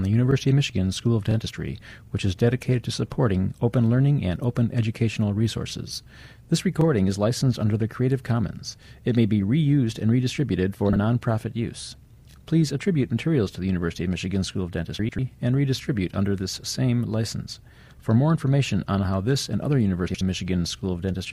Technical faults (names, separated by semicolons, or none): frames out of order